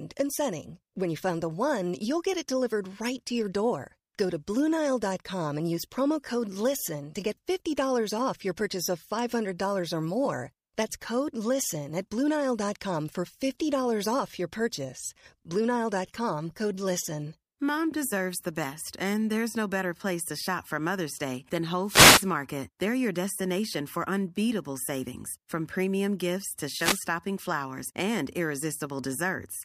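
At 21.83 s the speech is broken by a wireless microphone noise hit lasting until 22.30 s, a short burst of static where the radio link from the analogue FM transmitter faded as reflected paths cancelled, letting receiver noise rise over the signal. A second, briefer hit runs from 26.75 s to 27.03 s, right after "from premium gifts to" and before "flowers and", heard as a quick swish.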